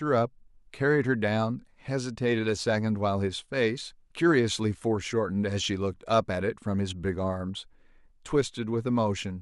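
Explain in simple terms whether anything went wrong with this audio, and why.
Nothing went wrong with this speech recording. There is no moment in it where a technical problem can be heard.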